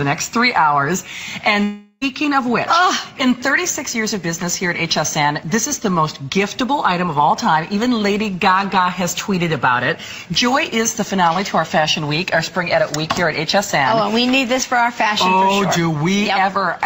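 A long network dropout runs from 1.63 to 2.03 s in this audio. For about 0.38 s the last sound carries on as a fading buzz or hiss, then 20 ms of silence, and the audio resumes with that stretch lost, likely because packets never arrived.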